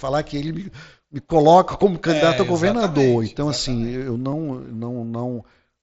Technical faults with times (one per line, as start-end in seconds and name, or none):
4.32 concealed Bluetooth headset packet loss